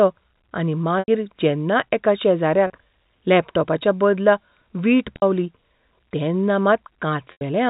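Packet loss with pitch repetition breaks up this speech four times. Each time, the receiver lost audio and bridged the hole by repeating the last pitch period. At 0.99 to 1.08 s, before "जेन्ना एका", 90 ms goes missing, and another 90 ms goes at 7.32 to 7.41 s. Both long gaps fade the buzz into silence, as does the 60 ms loss at 5.16 s. The shorter loss, 30 ms at 2.67 s before "लॅपटॉपाच्या बदला वीट", sounds like a briefly held, buzzy tone.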